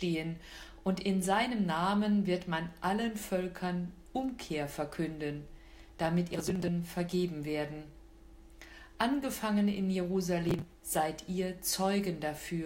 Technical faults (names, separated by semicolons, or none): processor overload crackle